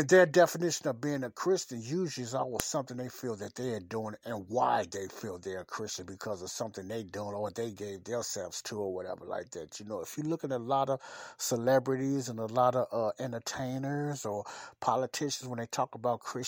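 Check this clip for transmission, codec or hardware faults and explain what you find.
One fault is present: a file header played as audio at 2.60 s. At that point the speech carries a single sharp, loud click, which suggests two WAV segments were joined or streamed without the second one's header being stripped. The few dozen header bytes are then decoded as sample values, producing an abrupt, high-amplitude transient that bears no relation to the surrounding signal. It sounds like a brief snap marking the segment boundary.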